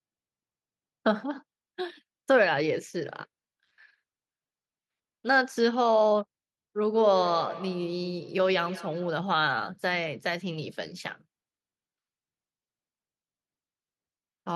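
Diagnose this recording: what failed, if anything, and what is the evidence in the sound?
Call processing: a feedback echo between two devices, each replaying the other's microphone, returns speech roughly every 150 ms from 6.92 to 9.31 s, about 14 dB down.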